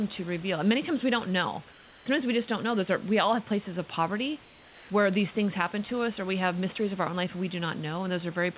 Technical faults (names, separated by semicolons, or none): comfort noise in place of the background